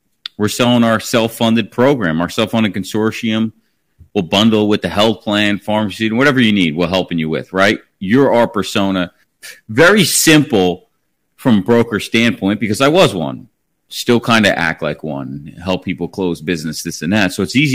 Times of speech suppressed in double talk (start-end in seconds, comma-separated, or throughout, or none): none